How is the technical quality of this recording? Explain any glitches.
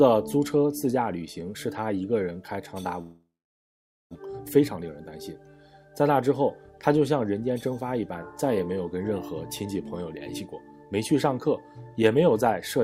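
Two glitches break up the recording, one shortly after the other.

From 3.01 to 4.17 s the sound dissolves into a fading buzz or hiss, then about 0.83 s of near silence, before resuming with roughly a second of audio missing. This is likely a long network dropout: the receiver stretched the last sound, then gave up.

From 4.25 to 4.93 s the audio runs hurried, at 113% speed with unchanged pitch. This jitter buffer speed-up followed the backlog: the receiver trimmed short pitch-period slices, about a tenth of a second in total, to cut the added delay.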